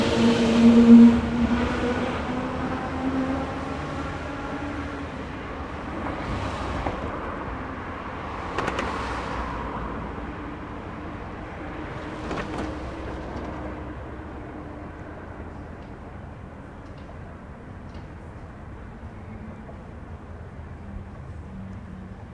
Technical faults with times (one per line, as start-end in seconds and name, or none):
none